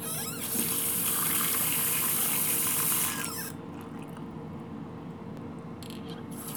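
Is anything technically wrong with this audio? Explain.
Yes. There are three brief jumps in the sound, at 1.09 s, 4.34 s and 5.37 s. Each is likely a dropped buffer (overrun). That happens when the recording software fails to collect incoming samples before the hardware overwrites them. A few milliseconds of audio vanish, roughly 3 ms at the first and last points and about 5 ms at the middle one. The two sides then butt together with no gap. That splice makes the jump forward.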